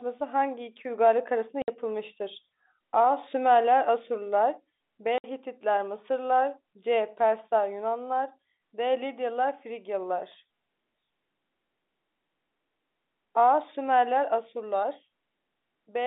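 Speech carried over a G.711 telephone path, band-limited to roughly 200 Hz to 3.7 kHz, is broken twice by packet loss filled with silence. At 1.62 to 1.68 s and again at 5.18 to 5.24 s the audio drops to dead silence for 60 ms, which fits three consecutive 20 ms packets going missing. The receiver inserted zeros rather than concealing the gaps, so each hole starts and ends abruptly.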